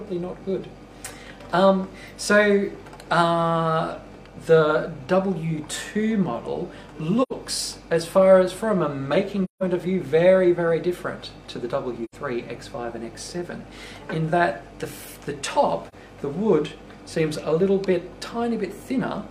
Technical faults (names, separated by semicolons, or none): AAC frame loss with muting